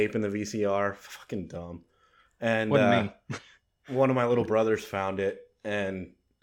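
From 2.59 s to the end, the resampler restarted on every block. Each 10 ms block converts alone, so edge errors produce a 100 Hz buzz under the speech.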